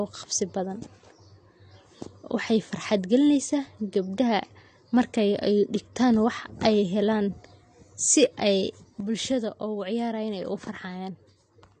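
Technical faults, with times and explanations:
Throughout: AAC compression. Content stops at about 9 kHz, and the speech sounds dull and smeared, with a watery, warbling texture on sustained vowels and a fizzy edge on sibilants. This is likely AAC-LC coding at a low bitrate, around 32 kbps. The encoder drops the top band and quantises the rest coarsely. On a spectrogram there is a flat ceiling at 9 kHz, with patchy, flickering holes and blotches in the upper bands.
9.00 s to the end: sudden gain jump. Between one sample and the next, the level falls by about 6 dB and stays down. Speech and background noise drop together. That points to a digital gain change applied without a ramp, likely a setting change or a one-bit shift. On the waveform the envelope halves abruptly at 9.00 s. On a spectrogram every band darkens at once along a sharp vertical edge.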